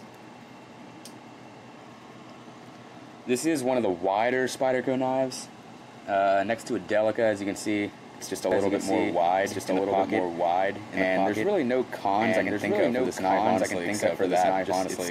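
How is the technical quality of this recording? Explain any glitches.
The recording has one clear fault: a doubled audio track from 8.51 s to the end. At that point a second, full-band copy of the sound abruptly joins, trailing the original by roughly one and a half seconds at about the same level. The copy has no decay or added room colour, so it reads as a clean, out-of-step repeat rather than an echo. The likely cause is the signal being captured again through a slower path or an edit leaving two overlapping copies.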